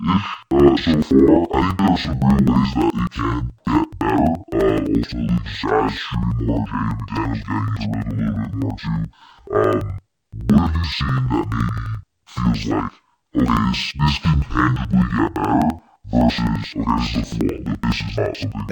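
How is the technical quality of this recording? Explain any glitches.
Not great: the whole thing has interleaved audio read as planar. Each 85 ms block's halves play together at half speed, so the speech sounds an octave low, doubled and choppy at 11.7 Hz, which fits a 4096-sample block.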